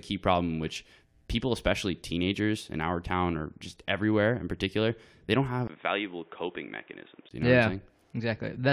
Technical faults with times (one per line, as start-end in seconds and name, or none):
5.67-7.31 input switched to a poorer device